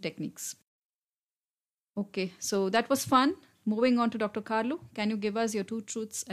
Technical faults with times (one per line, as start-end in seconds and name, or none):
none